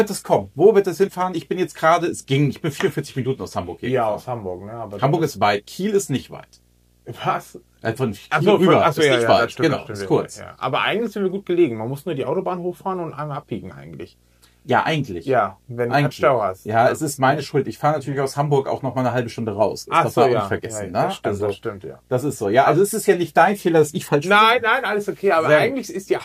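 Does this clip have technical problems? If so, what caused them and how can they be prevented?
Yes. A faint, steady buzz at 60 Hz with a hash riding above it runs through the entire clip, sitting roughly 40 dB below the programme. This is video or display buzz: a screen or video cable is coupling its field-rate interference into the audio path. Keeping audio cables and interfaces away from monitors and video lines, and using balanced connections, prevents it.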